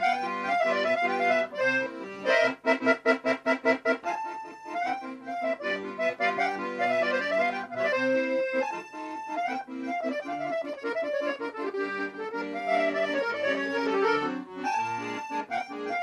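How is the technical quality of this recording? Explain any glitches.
No glitches or technical faults can be heard anywhere in the recording.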